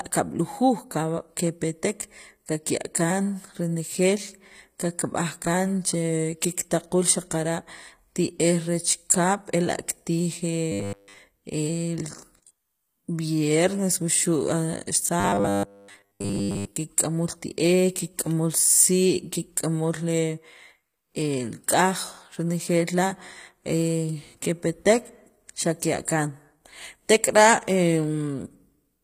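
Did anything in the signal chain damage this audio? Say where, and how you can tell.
Yes. HE-AAC compression runs through the whole clip and points to the codec stage. The upper treble sounds synthetic. The s sounds come out gritty and metallic, which is what spectral band replication produces when it copies lower bands upward under a coarse envelope. Damage this plain fits a low bitrate, around 24 kbps, and is likely from an HE-AAC v2 encode.

Robotic sound from repeated short buffers appears at 10.72–11.19 s and again at 15.20–16.77 s, at the driver or buffer stage. Both stretches take on a rigid 100 Hz buzz. That pitch matches a 10 ms chunk of audio being replayed while fresh samples fail to arrive. The first stretch sounds entirely made of repeats. The second is mostly repeats, roughly two thirds or more. The likely cause is a starved playback or capture buffer.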